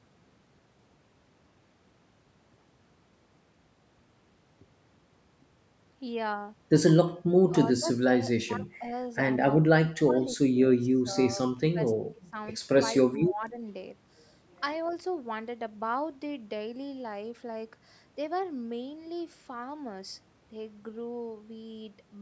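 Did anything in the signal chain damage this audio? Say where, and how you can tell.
Yes, the call processing stage. Speech suppressed in double talk appears at 7.51–8.86, 9.5–12.36 and 13.05–13.63 s. The speech dips by roughly 15, 20 and 10 dB in pieces. The likely cause is an echo canceller turning this talker down while the other side spoke.

There is also an echo leak at 14.88–14.92 s. A very faint, delayed copy of the speech comes back 257 ms late. The far end's echo canceller likely failed to remove its loudspeaker's output from its microphone, so a scrap was returned.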